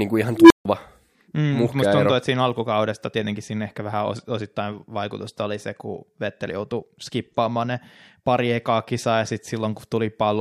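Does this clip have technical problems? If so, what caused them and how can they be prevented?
Yes. Just after "kuin ihan", from 0.35 to 0.65 s, an unstable filter produces a low tone near 300 Hz. A recursive stage with bad coefficients feeds back on itself, swelling over 150 ms to clipping, then overflowing into 150 ms of silence. Preventing it requires checking that filter poles stay inside the unit circle before applying coefficients.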